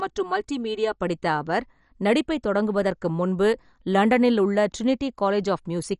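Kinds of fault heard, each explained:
MP2 compression: the whole clip sounds dull and gurgly, with nothing above about 11.3 kHz, which fits a low-rate Layer II encode of likely around 48 kbps. Too few bits means upper sub-bands get dropped and the remaining ones quantised coarsely, so the grain is plainly audible.
Channel delay (comb filtering): for the first second, up to "படித்த அவர் நடிப்பைத் தொடங்குவதற்கு", one channel trails the other by roughly 3 ms before they're summed to mono. Shared content cancels at evenly spaced frequencies, starting around 200 Hz, giving a hollow, phasey sound.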